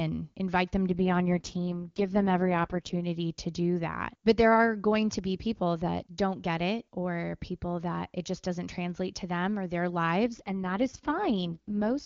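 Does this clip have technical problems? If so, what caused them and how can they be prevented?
Yes. Two AMR rate drops occur, from 0.89 to 3.02 s (after "invite them", recovering by "to do that") and from 10.25 s to the end (after "to them or their"). The HD Voice sound turns rough and raspy, which fits a step down from about 23.85 to 6.6 kbit/s on a weak radio link. Unlike a narrowband fallback, the high band stays present, and unlike packet loss, there is no gap. Improving radio coverage or signal strength prevents it.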